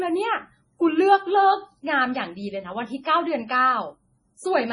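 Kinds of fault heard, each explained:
MP3 compression: The speech sounds dull and watery, with a swirling texture and nothing above 10.6 kHz. This is likely heavy MP3 encoding at a bitrate around 24 kbps, where the encoder cuts the treble and drops weak frequency components frame by frame.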